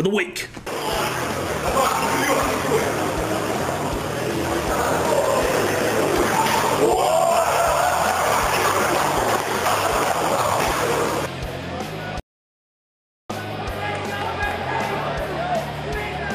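At 12.20 s there's an audio dropout to silence: the sound cuts off mid-flow and stays dead, with no room tone at all, until 13.30 s. That's about 1.1 s gone, likely because the input was lost through a disconnect, failed link or stray mute while recording carried on.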